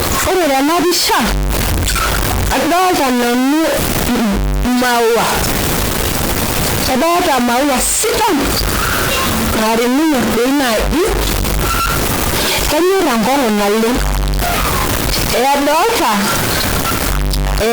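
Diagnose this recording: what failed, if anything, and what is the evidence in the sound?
Harsh, buzzy distortion runs through the entire speech clip, and pauses fill with loud noise. A stuck bit, likely at the converter, offsets about half the samples by a step near -10 dBFS. The waveform shows blocky jumps in quiet gaps, and a spectrogram shows broadband haze throughout.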